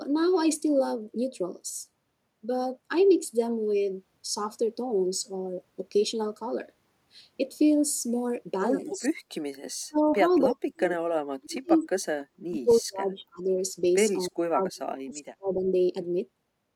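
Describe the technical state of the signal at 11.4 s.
At 11.4 s the speech is being cut down hard, by as much as roughly 40 dB, from 10.48 to 11.74 s. This is likely speech suppressed in double talk, with the echo canceller turning down its own talker along with the loudspeaker echo.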